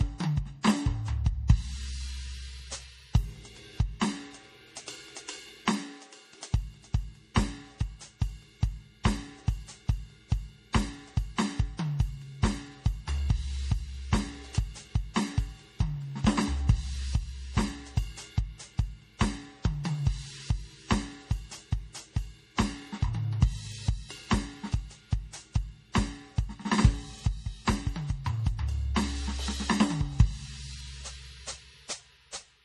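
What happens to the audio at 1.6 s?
At 1.6 s the music carries MP3 compression damage that runs through the whole clip. Its likely cause is an encoder short of bits, and the sound points to a rate around 40 kbps. It discards everything above 15 kHz and drops weak frequency lines that flicker in and out between frames, giving a plainly audible watery, swirling texture with smeared attacks. A simple low-pass filter would dull the treble but leave no such warbling.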